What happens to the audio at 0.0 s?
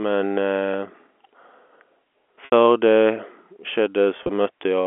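Nothing goes wrong at 0.0 s: the speech starts intact, carried over an ordinary G.711 telephone line whose narrow band, roughly 250 Hz to 3.4 kHz, is simply how this clip sounds.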